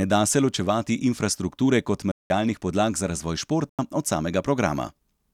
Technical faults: corrupt FLAC frame; corrupt frame muted

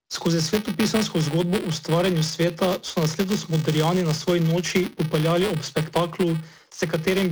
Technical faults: buffer tearing

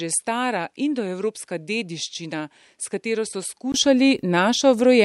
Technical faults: input switched to a poorer device

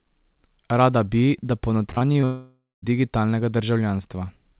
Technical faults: repeated packet loss (robotic sound); long network dropout

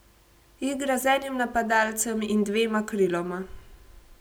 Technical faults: none

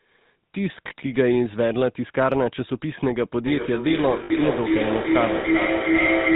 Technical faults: GSM full-rate codec; lost GSM frames; feedback howl

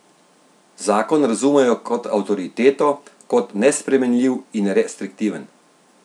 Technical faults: none

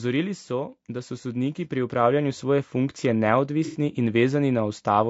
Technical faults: low-delay AAC compression; automatic gain rising; AAC frame loss with concealment

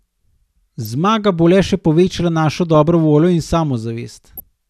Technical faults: DAB burbling

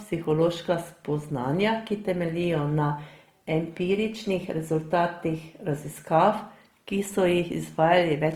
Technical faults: Opus compression

